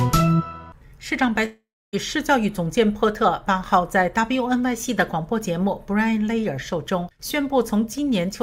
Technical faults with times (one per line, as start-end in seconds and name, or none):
1.45-1.95 long network dropout